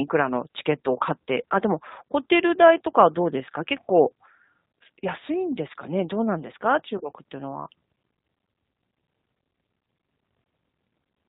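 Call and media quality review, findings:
G.729 codec throughout: speech band-limited, nothing above 4 kHz, plainly rough and synthetic, consistent with 8 kbit/s. The sparse pulse excitation gives a rough, synthetic texture rather than the smeared, bubbly artefacts of a transform codec, which separates it from plain narrowband telephone filtering.

VoIP packet loss concealed by the speech codec at 6.98–7.01 s: a short gap fitting a single lost 20 ms packet. Unlike a hard dropout or click, the decoder bridges it with a fading extrapolation of the preceding sound, and the speech stays weak briefly after.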